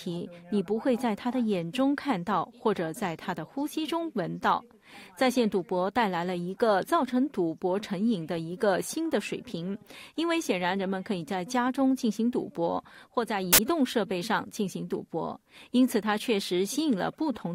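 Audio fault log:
13.53 to 13.58 s, file tags played as audio: a 57 ms burst of harsh, very loud static with abrupt edges, as compressed cover-picture data is read as samples. The spectrogram shows a flat broadband vertical slab, and the waveform jumps instantly to solid loud hash.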